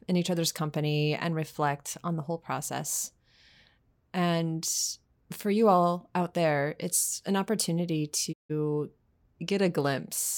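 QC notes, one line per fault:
8.32–8.52 s: digital broadcast dropout. The speech fades out over about 20 ms into a 160 ms silence, consistent with several failed frames being muted until clean data resumes.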